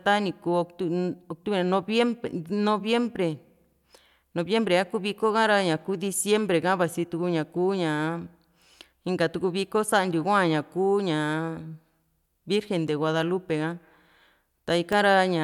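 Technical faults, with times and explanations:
11.84–14.93 s, periodic USB or driver dropouts: the audio path stalls about every 1.02 s, dropping a fraction of a millisecond to silence, heard as regular ticks over the speech.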